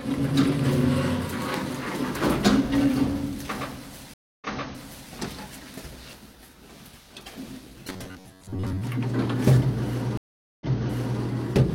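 At 4.14 s a stream reconnect begins. The connection drops and the sound goes silent for about 0.28 s. A fresh decoder then restarts. Playback resumes about 0.7 s earlier, so a short stretch repeats. The fault clears by 5.12 s.

From 7.90 to 8.82 s the sound turns hard and metallic, with a steady buzz at 93.8 Hz. This is robotic sound from repeated short buffers, likely. Segments of about 11 ms loop, and roughly half the real audio is skipped.

A second stream reconnect runs from 10.17 to 11.21 s. The silence is longer, about 0.44 s. The sound restarts about 0.6 s earlier than where it stopped, repeating that stretch before continuing.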